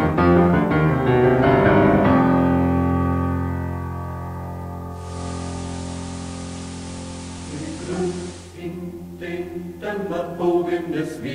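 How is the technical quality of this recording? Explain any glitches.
There is one glitch. From 4.88 to 8.65 s, digital radio blending to analogue occurs. The receiver lost its digital signal and cross-faded over 381 ms to the station's FM broadcast. Hiss appears about 25 dB below the signal, and level shifts about 4 dB.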